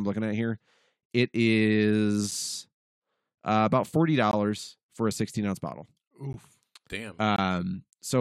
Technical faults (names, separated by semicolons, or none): gap between stream segments